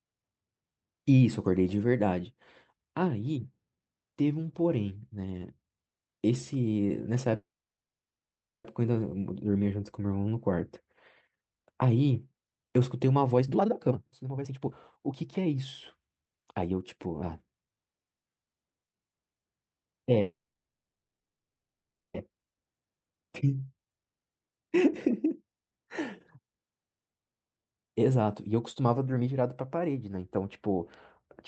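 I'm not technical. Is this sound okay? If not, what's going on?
No. The call audio freezes at 7.35 to 8.66 s and 20.21 to 22.16 s, going almost silent for about 1.2 and 1.8 seconds. Speech then resumes where it stopped. The likely cause is that pieces of the call were held up in transit, so the receiver ran out of sound and waited, inserting a pause without losing anything.

The jitter buffer speed-up happens at 13.31 to 15.56 s, 16.01 to 17.07 s, 22.30 to 22.62 s and 23.69 to 29.43 s. The speech sounds rushed but keeps its normal pitch, at about one and a half times normal speed in the first stretch and about a third faster in the last. The receiver had built up a backlog. It caught up by snipping out many tiny slices of speech, about a second's worth in the first stretch and about two seconds' worth in the last.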